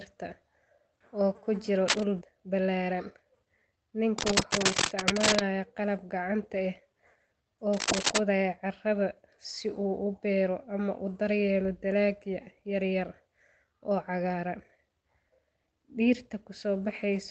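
Right after "oo ku jiro", from 1.88 to 2.03 s, there's a burst of cable scratch noise: a brief, uneven scratchy rustle sitting a little above the speech. It's likely a worn cable or connector being moved, so the contact resistance jumps around. It comes back twice more, from 4.18 to 5.39 s just before "qalab gacanta", and from 7.72 to 8.18 s leading into "carrada si uu u".

At 2.21 s the playback does a skip ahead. Roughly 0.7 seconds of speech is simply gone, dropped while later audio was already queued. The two sides butt together with no gap, so it sounds like an abrupt jump.

From 2.31 to 3.34 s there's a jitter buffer speed-up. The buffer was running over its target, so it trimmed tiny pitch-period slices repeatedly, shaving off about a tenth of a second. The speech runs at 110% with the same pitch and sounds hurried.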